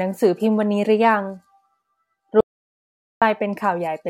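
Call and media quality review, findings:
Audio dropout to silence, 2.41–3.22 s: speech cuts mid-flow, about 0.81 s of silence, no room tone. Flat line on waveform, blank spectrogram column. Likely input loss while recording continued.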